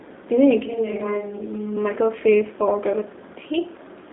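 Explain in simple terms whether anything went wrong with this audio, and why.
Yes, the whole clip, from start to finish, has been through a G.729 codec, a low-rate phone-call compression scheme. It rebuilds the voice from a simple model instead of storing it, so the speech sounds plainly rough and slightly artificial. Everything above about 3.8 kHz is gone, and the lowest bass is thin. A plain telephone filter would only sound muffled and narrow. This clip also has that gritty, synthetic texture.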